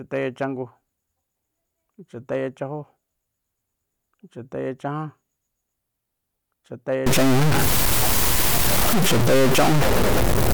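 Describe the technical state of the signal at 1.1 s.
At 1.1 s the speech signal is intact, with no audible fault at that moment.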